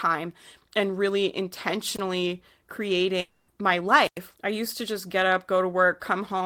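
A brief surge of hiss cuts across the speech at 1.94 s, then the sound drops into near silence for about 25 ms before returning by 1.99 s. This is a wireless microphone squelch dropout: the analogue FM radio link faded, and the receiver's squelch muted its output until the signal recovered. It happens again, longer, from 4.03 to 4.19 s, where the hole lasts about 100 ms.

Between these, from 3.20 to 3.49 s, the speech turns into a smeared buzzy continuation of the sound just before it, lasting about 280 ms, and then resumes further on with that stretch simply gone. There is no silent gap, because the substitute sound covers the whole hole. This is most likely a long network dropout: no packets arrived for that period, and the receiver stretched the last audio to fill the gap instead of playing the missing speech.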